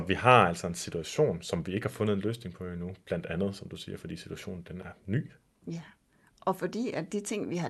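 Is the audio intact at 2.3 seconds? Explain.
Yes, the speech at 2.3 seconds is intact, with no dropout, glitch or other fault at that moment beyond the ordinary coding character of the call path it passed through.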